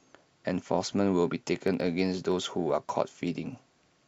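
Periodic USB or driver dropouts run from 1.49 to 3.92 s: about every 64 ms, something stalls the audio path and a sliver of speech, roughly a tenth of a millisecond, is skipped outright. The result is about forty evenly spaced ticks riding on the speech.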